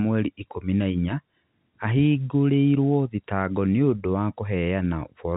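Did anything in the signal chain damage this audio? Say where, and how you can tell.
No, nothing in the signal chain damaged this speech. It has been through G.711 telephone coding, which shows as a band that stops at 4 kHz and a faint hiss that rises and falls with the level.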